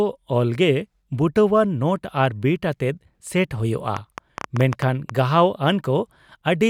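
From 3.97 to 5.10 s a train of clicks sits over the speech: around ten sharp, matching ticks at nearly 8 per second, unevenly spaced and well above the speech level, likely interference or a faulty connection. Their near-identical shape separates them from random crackle.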